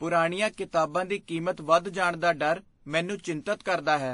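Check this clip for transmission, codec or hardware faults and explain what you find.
One codec fault runs through the whole clip. The speech sounds dull, with nothing above 10.5 kHz and two layers of coding artefacts heard together. This is likely transcoding between lossy codecs: the sound points to a low-rate Vorbis stage and then WMA, each adding artefacts and the lowest cut-off remaining.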